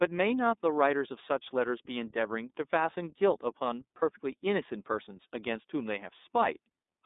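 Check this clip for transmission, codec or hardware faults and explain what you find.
The speech runs through the iLBC codec from start to finish, and there is one dropout where iLBC frames were lost, at 3.98 to 4.03 s.

The iLBC codec colours the whole clip. The audible band runs from about 250 Hz to 3.7 kHz, so the sound is narrowband and has no brightness above that. The codec damage is plainly audible. Each 30 ms frame is coded on its own at 13.33 kbps, which leaves the speech clear but slightly rough and synthetic in texture.

The lost iLBC frames come at 3.98 to 4.03 s. The damage points to a single missing 30 ms frame. The decoder covered the gap by repeating the last pitch cycle with noise mixed in. That makes a brief, held, faintly buzzy vowel-like sound. Because iLBC frames do not depend on earlier ones, the speech returns to normal almost immediately after the gap.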